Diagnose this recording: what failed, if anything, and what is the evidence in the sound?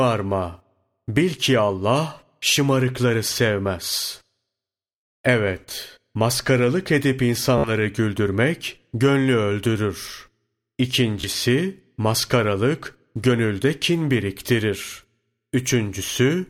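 The Bluetooth link lost or delayed packets, and the receiver looped its last buffer until data returned. The result is a buzzing Bluetooth stutter at 7.58 to 7.70 s, between "maskaralık edip" and "güldürmek gönlü öldürür", and at 11.21 to 11.28 s, with speech resuming about 56 ms and 28 ms later.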